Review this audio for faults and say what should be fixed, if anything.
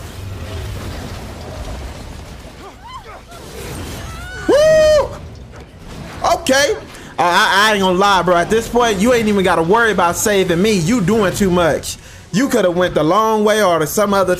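No faults turn up in this audio, so there is nothing that needs to be fixed.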